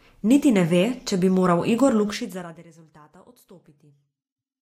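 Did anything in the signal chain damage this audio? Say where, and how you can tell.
Yes: zipper noise, 2.09 to 2.67 s, at a gain stage. The speech level drops roughly 25 dB in unsmoothed 1 dB steps, about 40 per second, each one clicking.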